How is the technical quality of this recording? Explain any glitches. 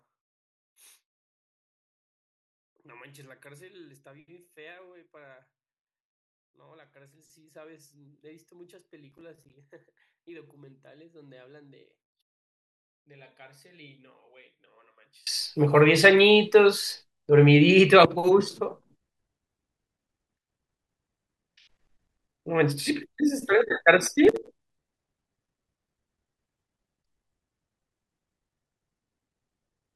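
The recording has two clear technical problems. From 0 to 15.3 s, the speech nearly disappears when played in mono, about 34 dB quieter. The likely cause is one channel inverted, so the shared centre cancels. At 9.12–9.54 s and 24.25–24.79 s, bursts of processor overload crackle appear: around ten missed buffers of roughly 5 ms each drop to silence. This sounds like gritty tearing rather than a single click, and it stops once the load passes.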